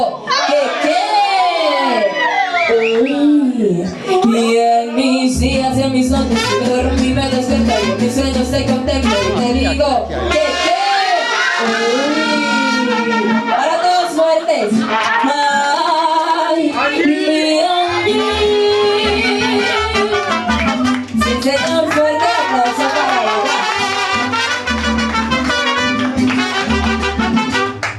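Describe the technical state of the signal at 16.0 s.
At 16.0 s the audio sits inside a time-stretched section running from 14.96 to 16.60 s. Across that span the pace jumps to roughly 1.94 times normal speed while the pitch stays where it was, so the material sounds rushed, with an abrupt change of pace. This is most likely software compression of the timeline to fit a target length, holding pitch by discarding short slices of the waveform rather than resampling.

Gain pumping is also present at this point, as it is across the whole clip. The level control swings by around 10 dB, and loud and quiet passages are pressed close together into a squashed result. The likely cause is input gain set far too hot for the microphone, with a fast limiter or compressor clamping down on every peak.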